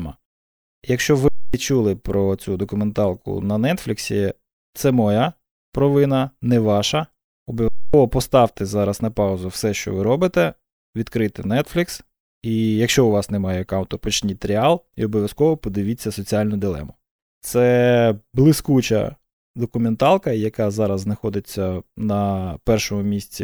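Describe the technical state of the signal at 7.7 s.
At 7.7 s the speech is interrupted by an underrun with held sample, lasting from 7.68 to 7.94 s. The output buffer ran dry for 256 ms. The converter held its last value until data returned, so the waveform goes flat. The sound simply stops, with almost no click. Around three tenths of a second of live audio was lost meanwhile. Resumption therefore jumps ahead.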